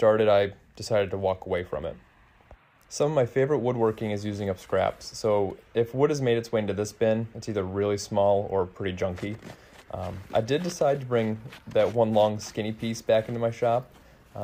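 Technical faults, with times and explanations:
No technical faults can be heard, with no times or explanations to give.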